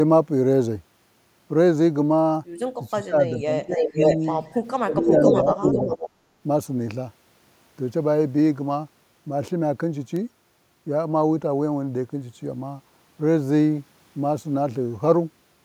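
Speech suppressed in double talk cuts into this speech recording at 2.92–3.66 s, 3.88–3.97 s and 4.85–5.88 s, with dips of about 25, 20 and 10 dB, likely from an echo canceller ducking the talker during overlap. Echo leak follows at 3.67–4.32 s and 5.23–6.1 s: a copy delayed by about 0.51 s, roughly as loud as the speech, likely from far-end loudspeaker pickup that wasn't cancelled.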